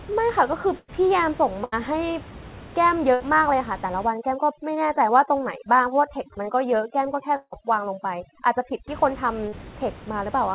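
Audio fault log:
0.78–0.90 s and 1.64–1.74 s, burst of packet loss: Each spot briefly freezes into a held buzz or fading hiss, then the speech jumps ahead with a piece gone. A short run of packets was lost or arrived too late. The receiver stretched the last sound and faded it to cover about 100 ms in the first case and 80 ms in the second, and the audio those packets carried never played.
4.07–8.88 s, overdone noise removal: Over this stretch the background drops to near silence scattered with twinkling specks, and the speech loses its quieter detail. A noise reducer set far too strong is cutting individual frequency bands whenever they sit close to its noise estimate. It removes the room noise, which lies about 18 dB below the speech, along with the softer parts of the speech that share those bands.
7.36–7.54 s, long network dropout: The sound trails off into a fading buzz or hiss, sits in silence for about 50 ms, and then picks up further along with roughly 160 ms of speech missing. 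The likely cause is that no audio arrived for that stretch, so the receiver extended the last sound for about 160 ms until it died away, then had nothing left to play. The speech is already band-limited below 4 kHz, and the gap falls inside the overprocessed section.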